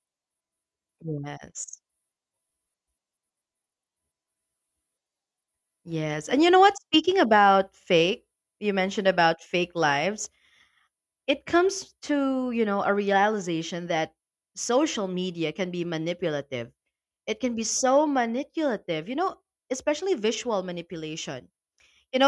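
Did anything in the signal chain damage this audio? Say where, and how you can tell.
No, nothing in the signal chain has damaged this speech recording; the signal stays intact and continuous, with no audible breaks, distortion or level disturbances at any stage.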